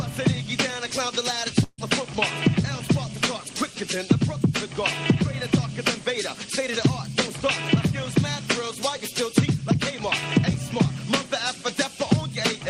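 The audio has a burst of packet loss at 1.63 to 1.79 s: a smeared, fading spectrogram band continuing the prior sound, a 30 ms flat waveform gap, and 140 ms skipped.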